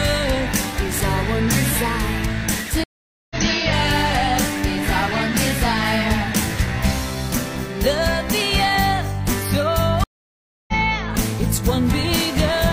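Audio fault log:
2.84–3.36 s and 10.04–10.74 s, stream reconnect: the connection dropped, leaving gaps of 0.47 s and 0.64 s while the player reconnected and restarted its decoder mid-stream. The sound resumes further on each time, skipping roughly half a second and then roughly 0.7 s.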